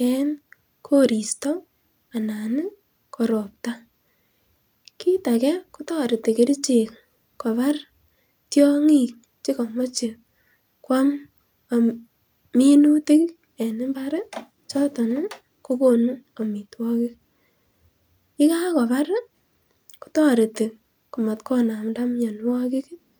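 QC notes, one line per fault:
Nothing here needed flagging, so there's no fault to log for this speech recording.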